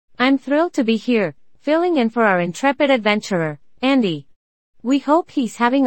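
Listening to this speech recording, nothing technically amiss stood out at any point.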